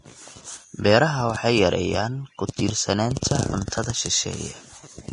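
Speech throughout sounds hissy and grainy, with nothing above 10.6 kHz and roughened, smeared treble, likely from heavy Vorbis compression at a low bitrate, around 33 kbps.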